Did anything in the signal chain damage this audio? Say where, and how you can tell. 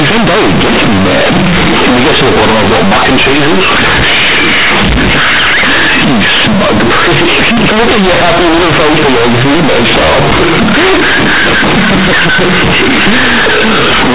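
Yes. Companded audio read as linear, throughout: at sample-format conversion, A-law bytes played as plain 8-bit samples without expansion, so speech buzzes loudly and pauses fill with noise.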